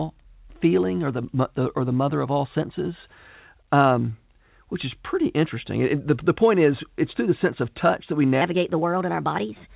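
A section at the wrong speed runs from 8.41 s to the end of the speech at 9.75 s. That final stretch plays 1.22 times faster than it was recorded, so the voice turns hurried and rises by roughly three semitones. Speed and pitch shift together rather than separately. The likely cause is playback or editing against the wrong clock. The sudden jump comes against the narrowband call sound, which has nothing above 4 kHz, consistent with G.711 A-law at 64 kbps.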